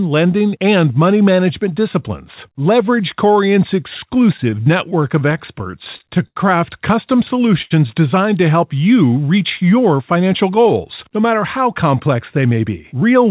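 Speech over a WebRTC call path, band-limited to nothing above 4 kHz, consistent with G.711 A-law at 64 kbps, with three kinds of jitter-buffer faults. From 4.14 to 6.38 s there are repeated stalls (stutter): sixteen separate gaps where packets arrived late or too slowly and the buffer kept running dry. The receiver held the last sound through each gap, filling about 224 ms in total, roughly a tenth of that span, with the longest hold at 82 ms. Nothing is lost, but the delivery drags and judders across those two seconds. At 7.62 to 7.72 s, just before "designed to help you", a short stall from a late packet occurs. The packet was not there when due, so the receiver stretched the preceding sound for 84 ms and resumed from the same point. The result is a single held sound with a slight buzz or dip and no missing content, leaving the playout 84 ms further behind. Two jitter buffer speed-ups follow as the receiver works off excess buffered audio by cutting out short pitch-period-length pieces. 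From 10.16 to 10.66 s, right after "help you reach your", playback runs at 110% speed, dropping about 50 ms. From 11.08 to 13.02 s it runs at 106%, dropping about 100 ms. Pitch stays unchanged in both, but the speech sounds noticeably hurried.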